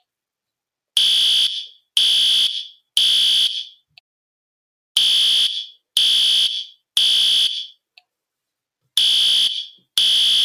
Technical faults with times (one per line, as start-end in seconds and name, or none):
none